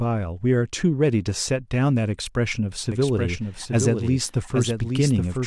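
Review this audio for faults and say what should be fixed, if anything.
From 2.92 s onward, a copy echoes the speech about 0.7 s late and about 5 dB quieter: a doubled audio track, likely a slower second capture. Capture the source through a single path and mute any duplicate feed before mixing.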